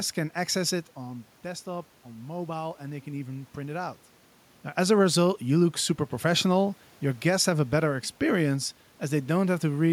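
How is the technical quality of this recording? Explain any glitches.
The recording has one glitch, an automatic gain rise in the first half of the speech.

Automatic gain rising, 0.95 to 4.08 s: after the talker moves away just before this and the level falls by about 10 dB, the gain control slowly adds about 5 dB. Unlike a talker moving, the room noise swells along with the voice, over roughly three seconds.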